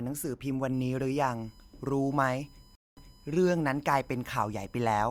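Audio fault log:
0.74–5.03 s, USB whine: A thin, steady whine sits under the speech at roughly 35 dB below it. It is pitched on a 1 kHz fundamental, but its loudest component is the fifth harmonic at 5 kHz, which gives it a sharper, higher edge than the fundamental alone. The bus's 1 ms frame timing is drawing current in regular pulses, and that ripple is leaking into the audio path through shared power or ground.
2.75–3.25 s, stream reconnect: The speech drops to silence for about 0.21 s. When it returns, it jumps back about 0.28 s, repeating material already heard, and comes in softly rather than at full level. The connection broke, the player went quiet until it reattached, and a freshly started decoder picked up from a point the server resent. Its first frames were muted or faded in, which is why the speech re-enters gently.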